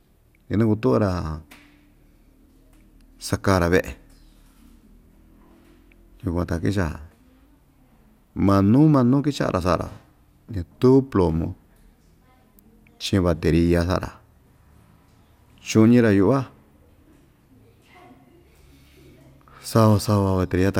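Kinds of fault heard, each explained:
Nothing stood out on listening to the speech in this recording.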